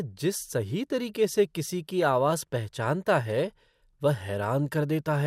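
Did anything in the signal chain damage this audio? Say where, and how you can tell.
Yes. At 2.03 s a few brief watery blips sit over the speech. This is DAB burbling at the codec stage. A very low rate of reception bit errors escaped error correction into the MP2 data, and corrupted samples put short blips of noise in single sub-bands, which fits about two frames being hit.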